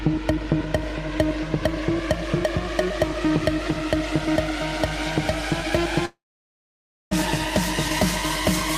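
At 6.05 s the sound breaks off and does not resume until 7.13 s. For a brief moment the last sound carries on as a fading buzzy smear, then roughly 0.94 s of near-silence follows, and the audio picks up again without the missing 1.06 s. This is likely a long network dropout, with the receiver concealing lost packets. On a waveform the envelope decays into a flat gap. A spectrogram shows a smeared tail, then an empty band.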